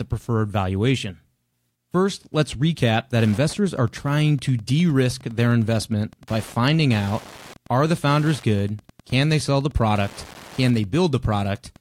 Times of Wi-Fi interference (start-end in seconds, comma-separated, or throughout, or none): 3.14-11.81